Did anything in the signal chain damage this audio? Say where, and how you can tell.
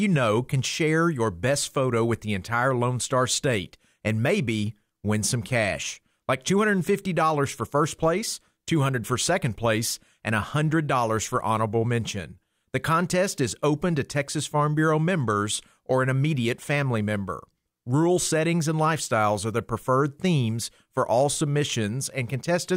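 No, nothing in the chain from capture through to playback has left an audible mark on this speech recording.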